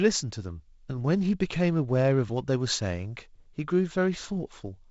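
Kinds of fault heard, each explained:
Nothing stood out on listening to this speech recording.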